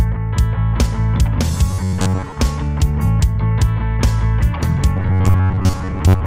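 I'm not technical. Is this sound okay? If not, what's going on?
No. From 1.71 to 2.35 s, and again from 4.97 s to the end, new audio likely arrived too slowly, so the system kept replaying a tiny slice of about 11 ms. That causes robotic sound from repeated short buffers: most of the real sound is skipped, leaving a flat, metallic buzz near 94 Hz.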